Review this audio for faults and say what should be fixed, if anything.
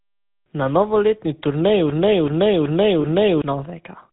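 The GSM full-rate codec colours the whole speech clip with a buzzy, gravelly roughness, which fits the 13 kbps full-rate coder. It models the vocal tract and drives it with a sparse, regularly spaced pulse excitation. A spectrogram shows nothing above 4 kHz and smeared, blocky harmonics. To prevent it, use a wideband or modern codec such as AMR-WB or Opus.

A broken-record loop runs from 1.90 to 3.42 s. A 379 ms fragment plays four times back to back, and the speech that belonged there is lost. This likely comes from a stalled player, encoder or stream re-sending its last buffer. A waveform shows identical blocks tiling exactly, and a spectrogram shows the same pattern stamped repeatedly. To prevent it, add stall detection that outputs silence or concealment instead of replaying the buffer.

Lost GSM frames appear from 3.02 to 3.05 s, inside that loop, which fits one lost 20 ms frame. The decoder repeated the previous good frame's parameters, giving a brief metallic ring. 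A spectrogram shows a short frozen harmonic stripe, and the waveform shows a brief repetitive stretch. To prevent it, improve channel error protection or use a codec with better packet-loss concealment.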